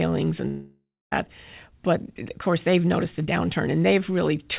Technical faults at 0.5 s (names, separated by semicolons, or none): long network dropout